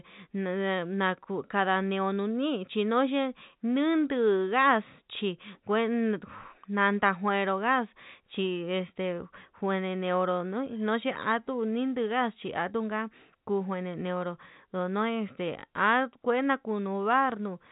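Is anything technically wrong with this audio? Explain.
No, nothing is technically wrong with this speech. It carries the narrow sound of G.711 telephone coding, with nothing above about 3.8 kHz, which fits the 64 kbps mu-law format, and any coding noise is faint at most.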